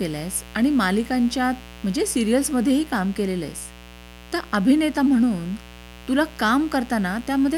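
From the very start to the end of the speech there's a mains buzz riding underneath, built on 60 Hz. Sharp spikes coming in on the power line twice per cycle stack up harmonics well into the kilohertz range, giving that raspy edge, sitting roughly 20 dB below the voice.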